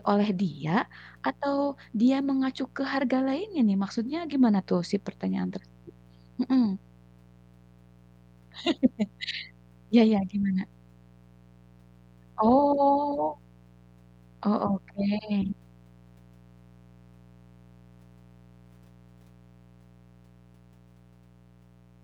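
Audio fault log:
throughout, mains buzz: interference from 60 Hz power, picked up through a dimmer, rectifier or gap in shielding, injects sharp switching spikes twice per cycle. Their harmonics stack up into the kilohertz range, so a steady raspy buzz sits about 30 dB below the speech for the whole clip.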